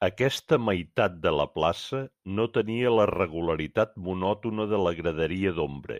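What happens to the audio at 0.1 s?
Nothing goes wrong at 0.1 s; the audio is intact at that moment, with no dropout, click or distortion to be heard.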